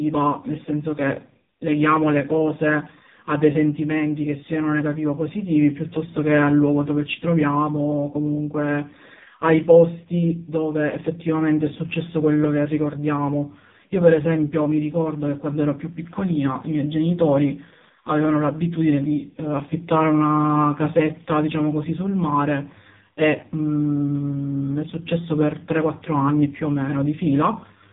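From start to end, the speech carries heavy AMR narrowband mobile codec damage. Nothing above about 3.8 kHz survives, and the voice turns buzzy and synthetic, which fits a low mode near 5 kbps. That artificial, pulse-driven timbre sets it apart from simple band-limiting.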